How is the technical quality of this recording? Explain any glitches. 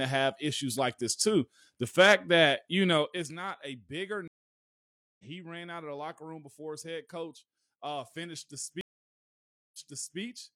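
The recording has three glitches: a zipper noise on one level change and two stream reconnects.

From 2.90 to 3.34 s, after "fact that you", zipper noise: the level drops about 15 dB in unsmoothed 2 dB steps, roughly twenty per second. Each step ticks audibly, and the waveform envelope shows a staircase.

At 4.28 to 5.24 s, after "a bigger", a stream reconnect leaves about 0.91 s of silence before a fresh decoder resumes at "he ran out of", roughly a second later in the stream. The waveform shows a flat gap. At 8.81 to 10.20 s a second reconnect gives about 0.93 s of silence, then resumes 464 ms earlier, so some audio repeats. On the spectrogram, both gaps appear as blank columns.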